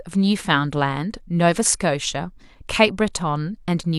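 Nothing in this speech recording registers as a technical fault.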